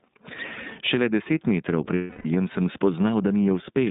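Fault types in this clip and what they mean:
Gain pumping: the gain is pulled down on each loud sound, a swing of roughly 15 dB, likely from a fast limiter on over-high gain; unlike steady compression, the level visibly breathes.
iLBC codec: narrowband VoIP coding passing only about 150 Hz to 3.7 kHz, in 30 ms frames at 13.33 kbps, leaving speech plainly rough and synthetic rather than merely muffled.
Lost iLBC frames: from 1.95 to 2.26 s, just after "deset metrov", about 300 ms becomes a held, buzzy vowel-like tone; speech recovers almost immediately, unlike codecs with lingering recovery.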